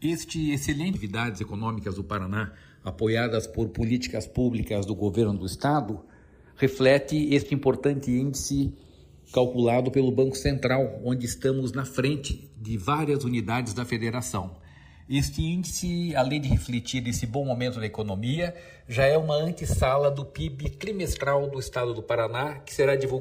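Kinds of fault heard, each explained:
Channels drifting apart: The two channels were captured on devices with separate clocks that disagree by something like 150 ppm, so the offset between them grows steadily to roughly 2 ms by the end. Summed to mono, the comb-filter notches from that changing delay creep slowly upward and downward through the spectrum across the whole clip, giving a gentle, continuous flanging or swirling colour rather than a steady tone.
Skip ahead: A stretch of audio, on the order of a second, was discarded while later audio was already queued, either lost in transit or dropped when the jitter buffer overflowed. At about 0.93 to 0.95 s playback leaps forward with no filler or silence inserted, so the material on either side is butted together almost directly and the sound jumps abruptly, with a chunk of the sequence simply gone.
Jitter buffer speed-up: After the jump, the receiver was holding more audio than its target latency and trimmed the surplus by repeatedly cutting out short pitch-period-sized pieces. 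From about 1.03 to 2.66 s the sound plays at roughly 111% speed with unchanged pitch, with something like 200 ms removed in total, so that stretch feels hurried and compressed in time before normal pacing resumes.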